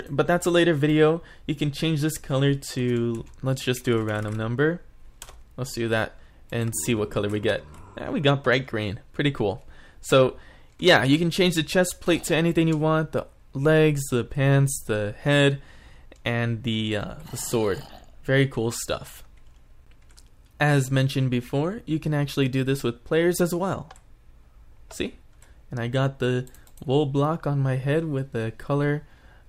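No technical faults can be heard anywhere in the audio. Nothing in it calls for a timestamp or a repair.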